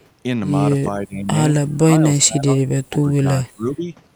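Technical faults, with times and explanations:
0.87–1.27 s, 2.00–2.04 s, 2.25–2.73 s, 2.89–3.26 s and 3.42–3.86 s, speech suppressed in double talk: the speech level sinks by roughly 15 to 20 dB in short patches, while the brief dip at 2.00 s is only a few dB. The likely cause is an echo canceller turning down the near talker while the far side is also speaking. Packet loss or a dropout would leave clean gaps or glitches. Here the sound is still faintly present.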